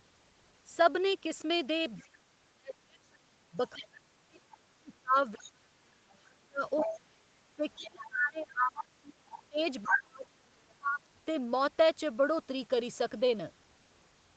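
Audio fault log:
1.97–2.08 s, 5.39–5.49 s, 6.76–6.96 s, 8.0–8.11 s, 8.75–8.81 s, 9.29–9.98 s: other side's voice leaking through. Brief second-voice scraps range from faint to as loud as the main speech at the last one, likely loudspeaker echo the canceller left behind.
2.25–9.17 s and 9.49–11.0 s: speech suppressed in double talk. The main speech dips very deeply in patches, about five seconds of the first span and about one second of the second, likely because the echo canceller muted both sides during overlap.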